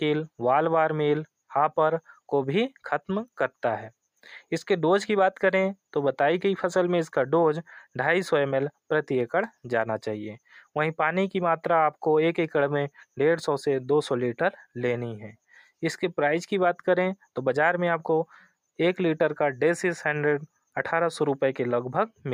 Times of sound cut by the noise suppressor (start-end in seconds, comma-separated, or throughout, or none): 15.49-15.70